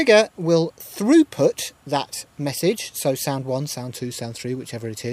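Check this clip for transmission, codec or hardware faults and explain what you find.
One fault stands out: at 3.90 s the audio drops into a drift correction step that holds to the end. Playback slows by about 6.2% and pitch falls 110 cents, roughly a semitone, likely from clock-matching software abruptly changing rate. Unlike wavering wow, it is one sudden, steady shift.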